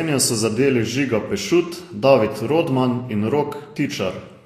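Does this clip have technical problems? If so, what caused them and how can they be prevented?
Yes. Throughout the speech, the likely cause is Vorbis compression at a low setting, consistent with about 35 kbps. The encoder quantises the treble so coarsely that fine detail becomes hiss-like noise, so the top end sounds grainy, with nothing above 14.2 kHz. Encoding at a higher quality setting prevents this.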